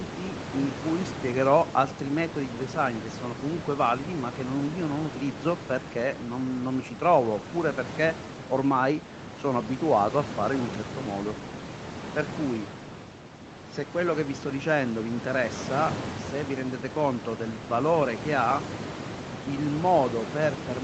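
No technical faults can be heard anywhere in the speech. What comes through is the ordinary sound of a call, with nothing above 8 kHz and a room noise sitting about 11 dB below the speech.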